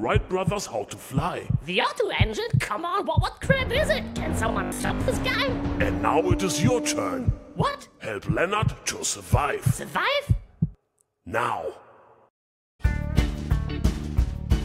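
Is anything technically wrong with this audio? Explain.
Yes. From 4.52 to 5.10 s there is robotic sound from repeated short buffers: the audio turns into a rigid, metallic buzz at 50 Hz. The likely cause is audio arriving too seldom, so the software kept replaying the last 20 ms chunk, with about half of that stretch filled by repeats instead of real audio. A spectrogram would show evenly spaced 50 Hz harmonic lines, and the waveform would show an identical 20 ms shape cycling.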